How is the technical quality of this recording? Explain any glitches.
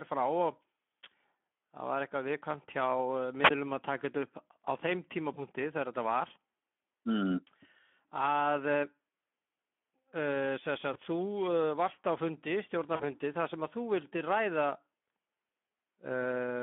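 The recording is speech with plainly audible codec damage throughout, plus four short glitches.

The Speex codec runs through the whole clip. The speech sounds hoarse and grainy because a low-rate CELP coder, here consistent with roughly 11 kbps, has too few bits to describe the excitation. A telephone-style band of about 200 Hz to 3.4 kHz confines it. Unlike packet loss, this roughness is constant rather than episodic.

A wireless microphone squelch dropout occurs from 3.43 to 3.50 s. The radio link faded, hiss briefly swelled, and the receiver's squelch muted the output for about 11 ms before the speech came back. A squelch dropout brings rising static and a true hole of near silence. Packet concealment instead fills the gap with extrapolated sound.

VoIP packet loss concealed by the speech codec occurs at 5.33 to 5.40 s and 10.93 to 10.99 s, each consistent with one lost 20 ms frame, and at 12.95 to 13.03 s, about 40 ms. 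The decoder extrapolated the last pitch and filter, producing a buzzy tone or coloured noise that fades, and the voice stays weak briefly after packets resume.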